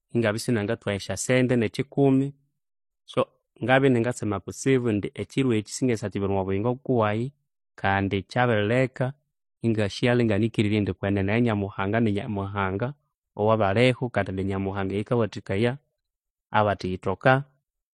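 From start to finish the speech sounds dull and smeared. Nothing reaches above 13.1 kHz, and two different kinds of codec artefact overlap. The likely cause is transcoding between lossy codecs. The audio was probably encoded once, around an MP3-like low bitrate, and then re-encoded with HE-AAC at a similarly low rate. The second encoder spent its bits on the first one's damage while adding its own.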